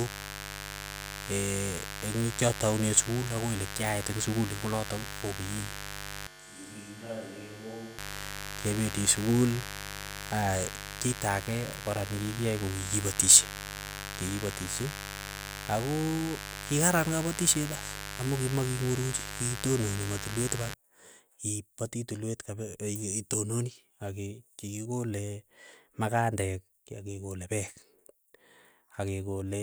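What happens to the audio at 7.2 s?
A switch to a distant microphone runs from 6.27 to 7.98 s, so at 7.2 s the speech is suddenly roomy and hollow, thinner in the bass and about 10 dB quieter, with room noise about 30 dB below it. The likely cause is the close microphone dropping out and a farther one taking over. Mains buzz from 0.0 to 20.74 s also continues through this moment: switching spikes at twice the 50 Hz mains rate add harmonics into the kilohertz range, giving a steady, raspy buzz about 10 dB below the signal.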